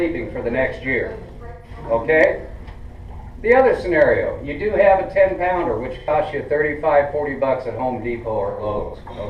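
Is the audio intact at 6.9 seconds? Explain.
Yes, at 6.9 seconds the audio plays through cleanly, with no dropout, click, distortion or other fault.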